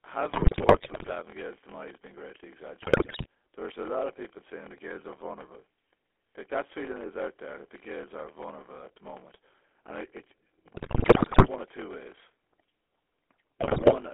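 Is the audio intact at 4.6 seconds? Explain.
No. At 4.6 seconds the speech carries two faults, and both run through the whole clip.

The first is a block size mismatch with zero padding. One stage hands over shorter blocks than the next stage reads, so each block ends in a run of silence. Those regular gaps produce a buzz at about 43.1 Hz, which fits a 1024-sample read block. The extra silence stretches the timeline, so the speech plays at 0.861 times its normal speed while staying close to its normal pitch.

The second is the GSM full-rate codec, consistent with its 13 kbps mode. The codec rebuilds the voice from a vocal-tract filter driven by a coarse, pulse-like excitation, which gives a plainly audible gravelly, buzzy roughness. The band is limited to about 300 Hz to 3.4 kHz, so the low body and the upper sibilance are both gone.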